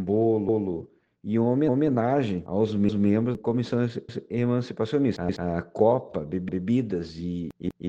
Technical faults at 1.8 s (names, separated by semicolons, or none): overlapping chunks